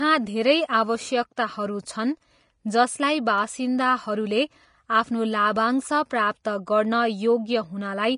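From start to end, the speech carries plainly audible damage, likely from Vorbis compression at a low bitrate, around 32 kbps. Nothing remains above 10.6 kHz. The coarsely quantised treble turns to grainy hiss. Consonant attacks blur, and tones sound roughened.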